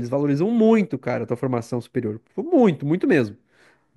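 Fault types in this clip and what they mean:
No technical faults can be heard in this speech recording; the signal stays continuous and stable throughout, with no dropouts, distortion or level disturbances.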